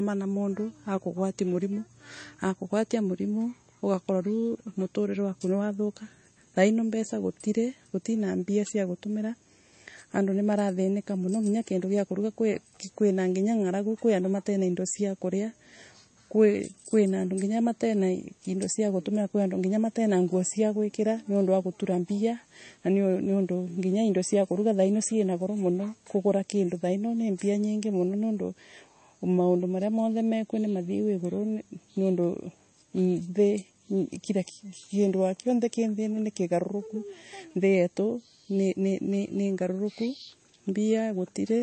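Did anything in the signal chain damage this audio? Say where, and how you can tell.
Yes. The damage is at the codec stage, likely MP3 compression, throughout the speech. Nothing survives above 8.3 kHz, and s sounds turn watery and swirly. Weak frequency lines drop in and out between frames. That fits a starved bitrate around 32 kbps.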